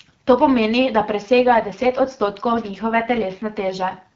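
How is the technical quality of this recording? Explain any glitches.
The recording has one glitch: an AMR rate drop. It comes through an AMR wideband (HD Voice) codec, with light coding damage at its normal rate.

From 1.35 s, just after "pomeni da", to 4.05 s, the speech turns rougher and more synthetic with no gap and no loss of bandwidth. The network lowered the codec rate, which fits a step from 12.65 to 8.85 kbit/s, shifting bits into error protection for a weak radio link.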